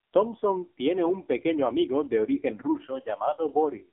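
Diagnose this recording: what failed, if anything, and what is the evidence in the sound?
The codec stage failed. Throughout, the speech passes through the AMR narrowband mobile codec, and the damage is heavy. The band runs from about 250 Hz to 3.6 kHz, and nothing above 3.8 kHz survives. On a spectrogram that shows as a flat ceiling with a thin low end. The voice sounds buzzy and synthetic, as the vocal-tract model rebuilds it from sparse pulses, which fits AMR-NB's 5.9 kbps mode.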